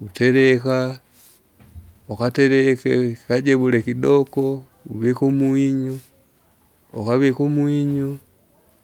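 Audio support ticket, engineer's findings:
No audible faults in the speech; nothing to isolate or escalate.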